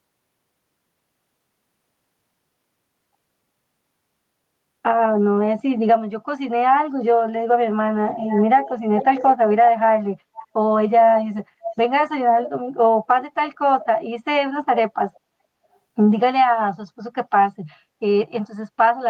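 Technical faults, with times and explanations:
8.09–8.44, 8.65–8.71, 8.98–9.33, 10.34–10.44, 11.64–11.73, 12.44–12.50 and 13.81–13.86 s, echo leak: a loudspeaker-side echo canceller likely failed to remove its microphone pickup, so brief speech copies return 424 ms late, about 10 to 20 dB down.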